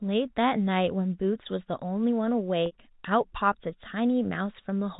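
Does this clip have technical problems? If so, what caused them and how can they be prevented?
Yes. At 2.66 to 2.72 s there is packet loss with pitch repetition: about 60 ms of audio never arrived, which fits three lost 20 ms packets, and the receiver filled the hole by repeating the last pitch period while fading it down. It sounds like a brief buzzy hold rather than a silent dropout or a stutter of whole syllables. The 4 kHz telephone bandwidth of the G.711 path is not part of it. Jitter buffering or forward error correction on the network link would prevent it.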